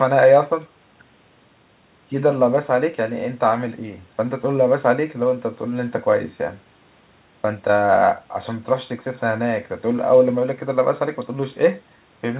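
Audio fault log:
Nothing here counts as a fault; the speech just has the narrow, phone-line sound of a call, with the highs stopping around 4 kHz.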